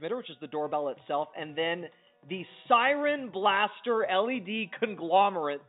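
No technical fault can be heard anywhere in this audio. It comes through a working call path, and the lack of any content above about 4 kHz gives it the narrowband character that fits a G.711 A-law telephone codec.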